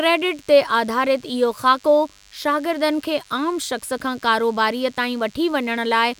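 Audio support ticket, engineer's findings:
DECT cordless phone buzz, whole clip. Nearby DECT handset or base bursting every 10 ms, the radio energy rectified in the audio input stage. Result: thin, steady 100 Hz buzz rich in harmonics, sitting roughly 30 dB under the speech.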